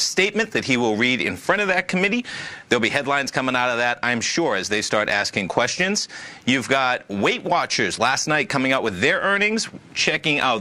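No technical faults can be heard anywhere in this audio.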